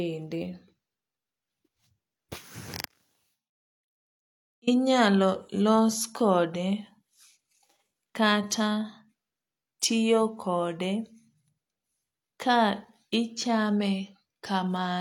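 At 2.86 s the speech suffers an audio dropout to a faint residue. The signal falls away abruptly, not as a pause or fade. For about 1.8 s only a faint trace of the sound remains, roughly 30 dB below its normal level. Full level returns at 4.67 s just as suddenly. The likely cause is a brief break in the signal path while the following stages stayed live, leaking a weak remnant through.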